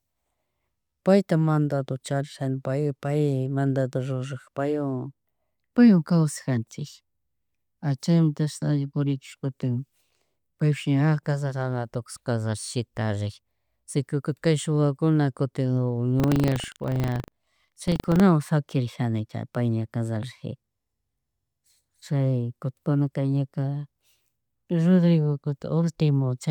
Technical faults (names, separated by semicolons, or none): buffer tearing